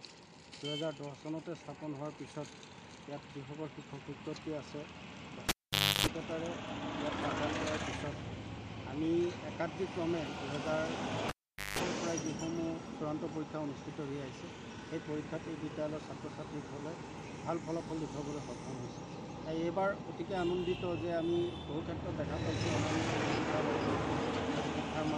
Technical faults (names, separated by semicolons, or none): cable pulled and plugged in